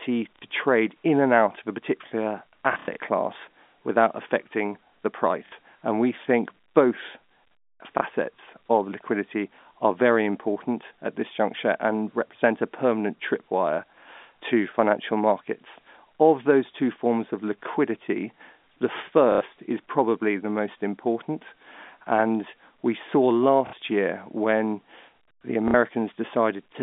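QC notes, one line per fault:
0.36–0.42, 5.46–5.52, 7.98–8.01, 19.32–19.41, 23.67–23.73, 25.68–25.74 s: packet loss with last packet repeated. Dropped audio (30 to 90 ms) is replaced by looping the last packet. Runs buzz robotically at about 33 Hz, which fits 30 ms packets. On the waveform, identical blocks repeat.
2.73–2.97 s: packet loss with last packet repeated. About 150 ms is lost, scattered across 240 ms, with the longest run 90 ms. This gives a broken stutter, seen as repeated waveform blocks and periodic vertical striping.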